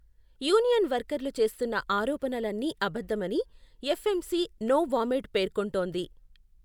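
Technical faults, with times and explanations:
Nothing stood out on listening to this recording.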